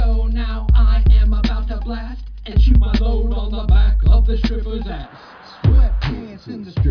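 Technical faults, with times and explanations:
No technical faults are audible anywhere in the recording.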